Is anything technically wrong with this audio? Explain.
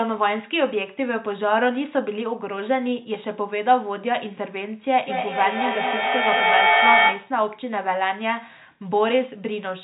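Yes, there's a feedback echo between two devices from 5.0 to 7.4 s. Two devices on the same call play each other's pickup, so speech circles back about every fifth of a second, getting thinner and more ringing, and it builds to about 5 dB above the speech over the telephone-band G.711 sound.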